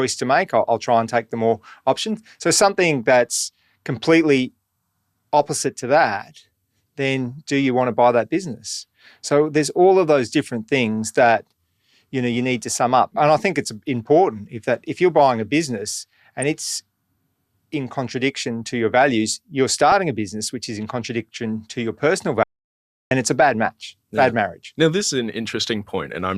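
At 19.92 s a corrupt frame is decoded. Damaged bits in a few compressed frames were played as if valid. Misread codes and gains push energy into the wrong frequencies. The result is a brief chirp, squeak or burst of noise in the speech.

At 22.43 s the speech drops out to silence. It returns at 23.11 s, about 0.68 s later. The gap is silent with no room tone. The likely cause is a lost input while recording continued. Whatever was said there is gone.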